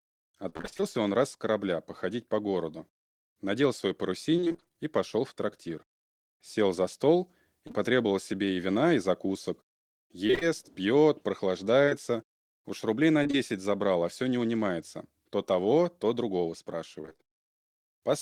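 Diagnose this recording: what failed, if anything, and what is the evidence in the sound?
Network packet loss, repeated, concealed by the decoder: at 0.49–0.84 s, 4.37–4.78 s and 17.01–17.25 s, roughly half of each stretch is patched, giving choppy, robotic speech.

Short concealed packet loss on the network: two back-to-back 20 ms losses at 7.67 s and 7.71 s, filled by extrapolation, leave a brief smear or wobble in the speech.

Scattered short gaps from sporadic network loss: about ten concealed holes of around 20 ms each between 10.27 s and 13.35 s cause occasional ticks and hiccups.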